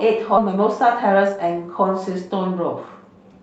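At 0.37 to 0.39 s there is a skip ahead. Roughly 0.4 s of speech was dropped and the two sides were joined with no filler, so the sound jumps abruptly mid-flow. A waveform shows a sudden discontinuity, and a spectrogram shows harmonics breaking off and restarting elsewhere.

From 0.49 to 1.44 s, and again from 2.30 to 3.40 s, a jitter buffer speed-up trims repeated pitch-period-sized slices to drain excess delay. Playback runs at 107% and then 109%, losing roughly 70 ms and 100 ms, so the speech sounds hurried at unchanged pitch. A spectrogram shows compressed timing with harmonics unshifted. The Opus call path's spectrum stops near 8 kHz.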